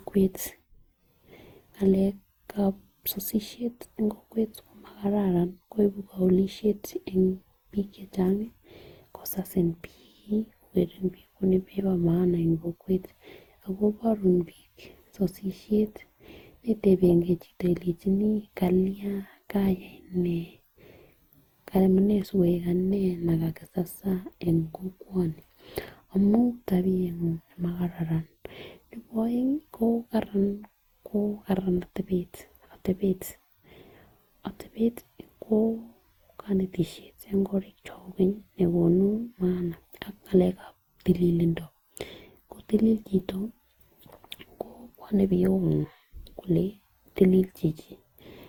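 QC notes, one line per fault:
Throughout, generation loss: likely around ten successive lossy encodes, consistent with Opus near 64 kbit/s, each requantising on a shifted frame grid. Noise and spectral holes accumulate, so the speech sounds swirly, hollow and smeared, with blurred consonant attacks.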